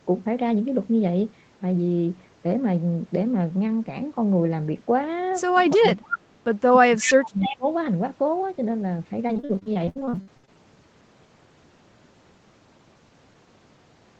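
From 5.75 to 6.33 s, and again from 6.8 to 7.66 s, the speech sinks by as much as about 30 dB, dulls and breaks into pieces for roughly half a second and then roughly 0.7 s. This is speech suppressed in double talk. The echo canceller likely mistook the local talker for loudspeaker echo while the far side was also speaking, and turned everything down. Unlike a packet dropout, these are level dips that follow the overlap, with no looping or metallic filling.

Inside those same stretches, at 6.11–6.19 s, 6.99–7.14 s and 7.41–7.56 s, short scraps of the voice return 304 ms late. They sit about 10 dB below the speech, or about 5 dB below in the middle scrap. This is echo leak: the loudspeaker side's canceller likely failed to remove all of what its microphone picked up, so a delayed copy was sent back. Each fixed 304 ms lag sets it apart from the dips around it, because it adds a late copy of the voice instead of removing level.

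From 9.27 to 10.49 s, the audio turns choppy and robotic through repeated packet loss. Holes of up to 65 ms follow one another closely, and each is patched by stretching the last sound, so roughly 42% of the span is concealed. The result is a choppy stutter with pieces missing, not a smooth drop in level.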